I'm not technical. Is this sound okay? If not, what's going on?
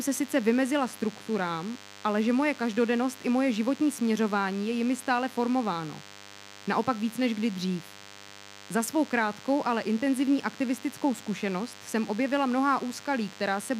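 No. A thin, steady buzz runs under the speech for the whole clip, from the first second to the last. This is DECT cordless phone buzz. A cordless phone or its base station nearby sends out a short radio burst 100 times a second, and the recording circuitry picks it up and turns it into sound. The result is a thin 100 Hz buzz with many overtones, quieter than the speech.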